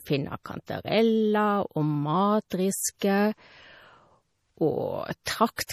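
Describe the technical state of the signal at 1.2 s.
At 1.2 s, as throughout, the speech shows plainly audible damage, likely from MP3 compression. Nothing is present above 15 kHz, and starved frequency lines flicker to a watery swirl, consistent with roughly 40 kbps.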